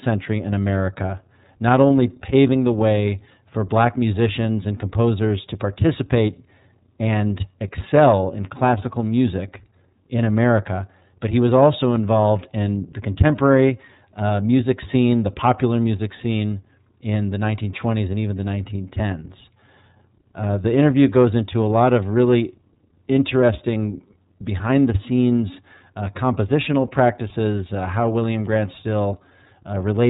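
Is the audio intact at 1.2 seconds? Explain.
No. At 1.2 seconds the speech carries iLBC codec damage, as it does throughout the clip. The codec rebuilds the excitation of each block on its own, and the plainly audible roughness and slightly synthetic texture fit the 30 ms frames of its 13.33 kbps mode. Nothing passes above 3.8 kHz. A plain low-pass filter would dull the sound but keep it smooth, so this frame-wise grain, alongside the band limit, marks a codec.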